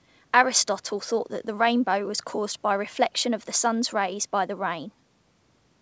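No technical faults are audible.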